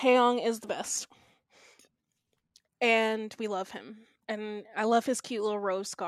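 Listening to the speech from beginning to end, nothing stood out as a technical problem at any point.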